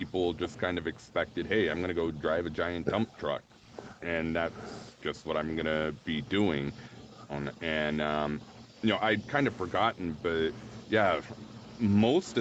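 Speech with no technical faults.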